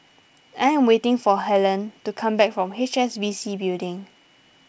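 This speech recording shows no technical faults, and its wideband telephone coding carries the voice band with at most faint coding damage.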